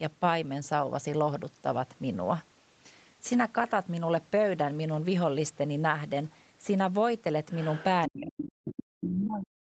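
In this speech clip, a faint second voice surfaces from 7.51 to 7.84 s, again from 8.77 to 8.83 s and from 9.21 to 9.25 s, sitting roughly 15 to 20 dB below the talker. This is the other side's voice leaking through, likely loudspeaker echo the canceller failed to remove from the microphone. From 8.08 s to the end, the talker's own voice collapses by as much as around 40 dB. That is speech suppressed in double talk: with both sides active, the echo canceller likely mistook the talker for echo and attenuated everything together.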